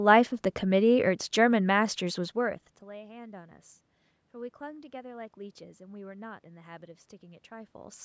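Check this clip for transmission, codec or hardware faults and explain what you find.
No transmission, codec or hardware faults are present; the level shifts around 2 s and 7.5 s come from the talker moving relative to the microphone, and the background room noise and the call microphone processing, with nothing above 8 kHz, are normal.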